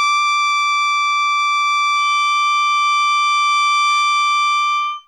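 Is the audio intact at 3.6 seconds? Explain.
No. A feedback whistle runs from 1.91 s to the end of the clip, so 3.6 s falls inside it. The likely cause is a loudspeaker-to-microphone loop poised just at the edge of feedback, where a single frequency keeps ringing without building up. Here that is a thin, steady tone at 3.1 kHz, sitting roughly 20 dB below the music and swelling and fading slowly in level.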